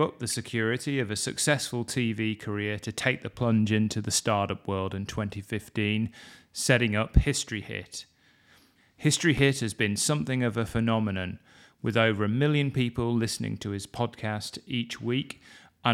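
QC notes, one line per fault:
9.38–9.41 s, loud pop: a single sharp pop sits on top of the speech just before "has been something of", peaking at about 5 dB above the surrounding signal and lasting around 30 ms, while the speech carries on underneath without a break. The abrupt onset and brief decay fit a sudden electrical pulse, likely a switch, plug contact or static discharge, reaching the signal path and being shaped by the circuitry that follows.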